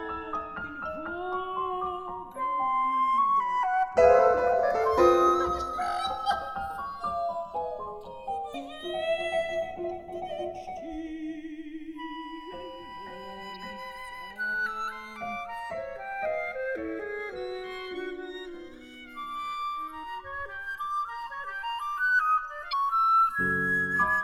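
A slow flanging runs through the whole clip, with comb notches sweeping gradually across the spectrum when the channels are summed to mono. This is the two channels drifting apart: they come from separately clocked devices a few tens of parts per million apart, so the delay between them creeps to a little under a millisecond by the end.

Brief chirps, squawks, clicks or short holes break in at 8.51 to 8.55 s, at 13.54 s, and at 22.69 to 22.73 s. These come from damaged data in the compressed stream: corrupted bytes make the decoder misread those frames and lose sync until it finds the next frame header.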